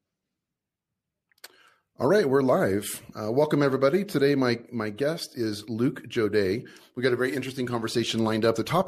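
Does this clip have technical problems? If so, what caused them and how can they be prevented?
No, there are no technical problems to report here.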